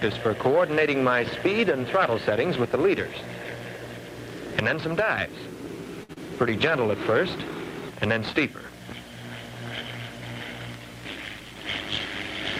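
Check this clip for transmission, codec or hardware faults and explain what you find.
Three transmission faults are audible, all from packet timing on the network path rather than from the codec or the hardware.

Short stall from a late packet, 6.03 to 6.11 s. A packet arrived behind schedule and the jitter buffer ran dry, so the receiver held the last sound for 56 ms and then resumed exactly where it stopped. Nothing is lost, but the sound hangs slightly too long with a slight buzz or dip, and everything afterward sits 56 ms later than before.

Short concealed packet loss, 6.13 to 6.18 s. Right after the stall, 40 ms of audio never reached the decoder in time. The receiver bridged the gap with 32 ms of synthesized continuation, extending the preceding sound's character, then crossfaded back into the real signal. The result is a brief smeared wobble.

Jitter buffer speed-up, 11.17 to 11.64 s. 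The buffer held more than its target, so the receiver trimmed small pitch-period-length slices repeatedly to shed the excess, roughly 50 ms in total. Over that half second the audio plays about 10% fast at unchanged pitch, giving a hurried, rushed feel before normal pacing returns.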